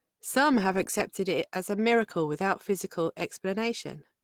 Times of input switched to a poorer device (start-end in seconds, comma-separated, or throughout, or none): none